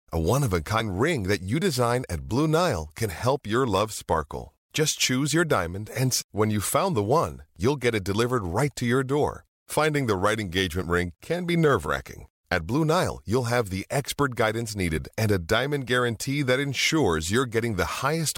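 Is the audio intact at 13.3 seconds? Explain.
Yes, the speech runs intact at 13.3 seconds, with no dropout, click, distortion or other fault at that point.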